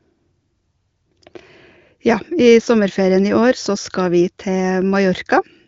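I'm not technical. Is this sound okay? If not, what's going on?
Yes, this is ordinary HD Voice phone-call audio from the AMR wideband (HD Voice) codec, which carries the sound up to about 7.5 kHz and leaves little or no audible trace of its compression.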